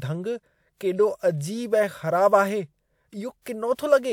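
Nothing in the speech stood out as a technical fault on listening.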